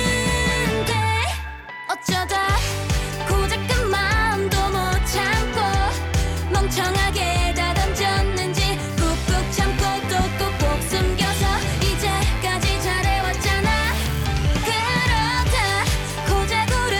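Mains buzz enters at 9.09 s and continues to the end at 16.99 s. Sharp switching spikes, of the kind a dimmer, rectifier or unshielded cable lets in, ride on the 50 Hz supply twice per cycle, so they recur 100 times a second and spray harmonics of 50 Hz up into the kilohertz range. The result is a steady, raspy buzz sitting roughly 20 dB under the sound, constant in pitch and never letting up.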